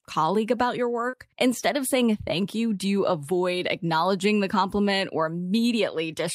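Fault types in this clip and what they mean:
Short concealed packet loss: Around 1.09 to 1.14 s, just after "colleague about your", roughly 40 ms of the call's audio arrived too late to be decoded. The receiver covered about 35 ms of that gap by extending the preceding sound, either repeating its pitch or filling with shaped noise. It then faded back into the real signal. The result is a brief smear or wobble at that spot, and a short sound there may be lost.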